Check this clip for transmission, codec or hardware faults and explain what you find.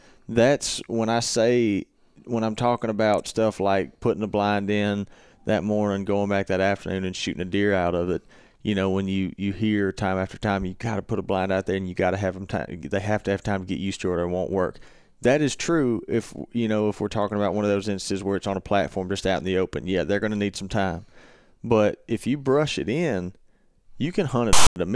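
One fault stands out, near the very end of the speech. From 24.53 to 24.76 s, file tags are played as audio: a block of metadata text, followed by zero padding, is decoded as though it were samples. The text bytes produce a loud, rasping burst sitting off-centre to one side, then the padding drops to dead silence. Unlike random interference or a codec glitch, it starts and stops with hard edges and carries that lopsided offset.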